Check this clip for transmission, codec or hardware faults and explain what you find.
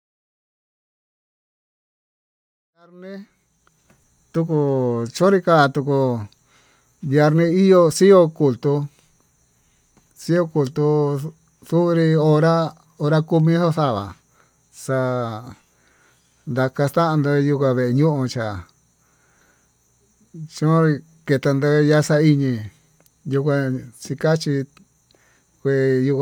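No faults can be heard.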